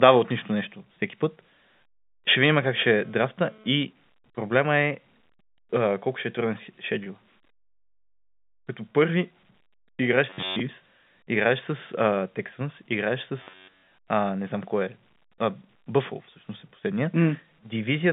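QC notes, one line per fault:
2.74–3.74 s, GSM phone buzz: a nearby 2G phone's data bursts are being rectified, giving an intermittent raspy 217 Hz buzz about 28 dB down, between "видим как" and "проблема е".
7.04–7.06 s, packet loss with pitch repetition: a 20 ms gap after "колко ще е труден" is bridged by repeating the last pitch period, heard as a briefly held, buzzy note.
10.30–10.62 s, robotic sound from repeated short buffers: a rigid metallic buzz at 93.8 Hz with most real audio skipped, likely from a repeated block of about 10.7 ms.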